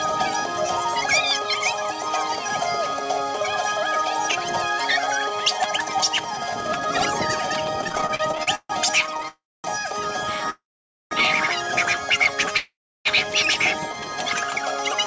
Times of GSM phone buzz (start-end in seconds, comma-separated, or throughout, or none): none